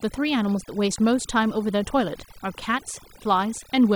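Overdone noise removal runs throughout: aggressive noise reduction switches off frequency bands near its noise estimate, leaving twinkling specks in near-silence.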